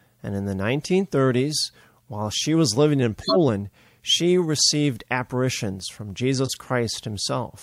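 After "she was living in" (3.21 to 3.37 s) and "she received apparitions from" (6.45 to 6.57 s), a corrupt frame decoded produces loud chirpy noise bursts, as a few bit-damaged frames decode with misread gains. Unlike a dropout, wrong energy appears instead of silence.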